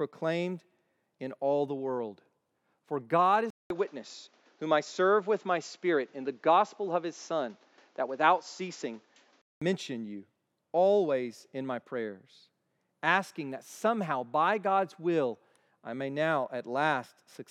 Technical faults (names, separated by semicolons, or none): input switched to a poorer device